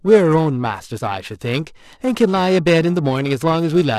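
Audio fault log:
Throughout, periodic clock jitter: a rough, metallic edge on the speech, gone in pauses, as the converter clock wobbles at about 1 kHz, adding sidebands.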